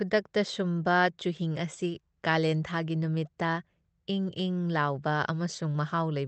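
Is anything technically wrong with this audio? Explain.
No, nothing here is at fault: the speech simply has the ordinary character of a WebRTC call path, with its top end stopping near 8 kHz in a way that fits Opus at around 24 kbps.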